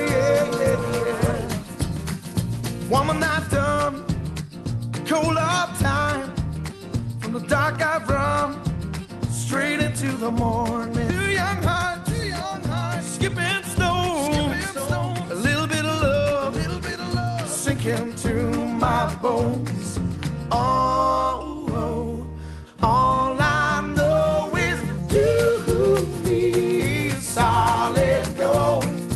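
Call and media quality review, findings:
Skip ahead at 11.09 s: playback jumps forward with no gap filled, roughly a second of audio gone. Jitter buffer likely dropped queued audio on overflow, splicing both sides almost directly. Delay drops by about a second.

Jitter buffer speed-up, 11.32–12.05 s: sound runs about 20% fast at unchanged pitch, noticeably hurried. Receiver trimming short pitch-period chunks repeatedly, around 150 ms total, to shrink the still-oversized buffer. Opus call path audible underneath, band-limited near 12 kHz.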